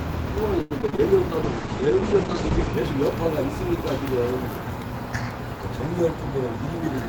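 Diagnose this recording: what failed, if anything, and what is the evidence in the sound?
Network trouble first: from 0.61 to 1.00 s there's repeated packet loss, giving that robotic sound. The gaps come in quick succession, each filled by stretching the previous audio, so over 40% of the stretch is concealment. It sounds choppy, with the longest hole about 90 ms.

Then a call bitrate drop at the codec stage, 1.46 to 2.79 s. Everything above 8 kHz vanishes and the texture turns coarse and watery for about 1.2 s, which fits the encoder being pushed from roughly 32 kbps down to about 9 kbps.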